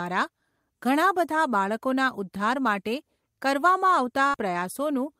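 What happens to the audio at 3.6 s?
Nothing goes wrong at 3.6 s; the audio plays through that moment intact, with no dropout, click or glitch.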